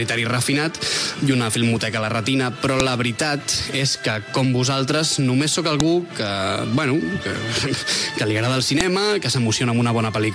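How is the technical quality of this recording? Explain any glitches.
The recording has one recurring glitch. A file header is played as audio at 2.80, 5.80 and 8.81 s. The audio seems to have been joined from 3-second WAV pieces whose headers were left in, so those header bytes play as samples. Each one is a brief, sharp click at the start of a new piece, regardless of the surrounding sound.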